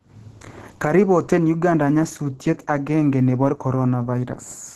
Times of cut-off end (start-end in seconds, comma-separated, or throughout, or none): none